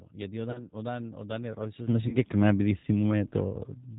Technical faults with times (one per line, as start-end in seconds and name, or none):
0.00-3.98 G.729 codec
0.51-0.63 VoIP packet loss concealed by the speech codec
1.88-3.98 sudden gain jump
2.09-2.17 VoIP packet loss concealed by the speech codec